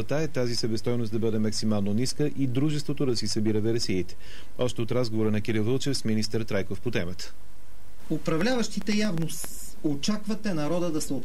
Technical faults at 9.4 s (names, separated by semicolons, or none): train of clicks